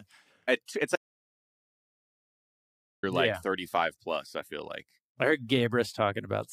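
At 0.96 s, just after "to it's", the speech cuts off into an audio dropout to silence. The gap lasts until 3.03 s, about 2.07 s, with no room tone at all. The input was likely lost while silence kept being written. Whatever was said then is gone.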